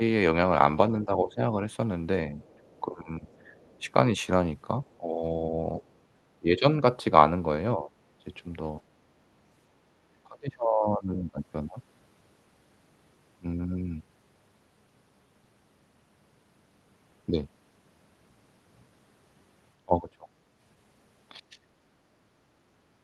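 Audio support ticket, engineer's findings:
Talker's speech dips and thins in pieces, 0.0–7.91 s, roughly 1.5 s affected in total, deepest drop about 15 dB. Likely speech suppressed in double talk: echo canceller cannot tell near talker from loudspeaker echo and attenuates both.

Same symptom, harder, 10.04–11.4 s, about 1.5 s affected, down about 30 dB. Again 19.85–21.59 s, around half a second affected, about 25 dB deep.

Faint second voice under the talker, 2.42–5.93 s, about 35 dB below the speech. Likely the other side's voice leaking through: far-end audio played on the talker's loudspeaker reaches the mic and the echo canceller leaves a residue. Overlaps the first suppression window, consistent with the canceller struggling during double talk.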